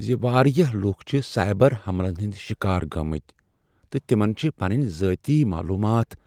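Nothing in the speech stood out as a technical problem on listening.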